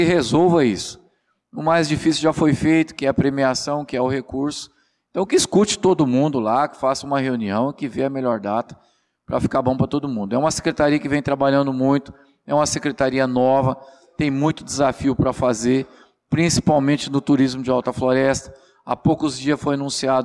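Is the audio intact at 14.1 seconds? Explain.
Yes, the audio at 14.1 seconds is intact, with no dropout, click, distortion or other fault at that moment.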